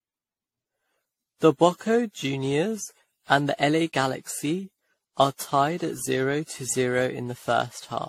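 From start to end, the speech sounds swirly, smeared and hollow, and consonant attacks are blurred. Nothing is present above 16.5 kHz. The damage is heavier than one lossy encode at this quality would leave. The likely cause is generation loss: the audio was decoded and re-encoded around ten times, with a character that fits AAC-LC at 64 kbit/s. Each pass quantised the signal again on a shifted frame grid, so noise accumulated.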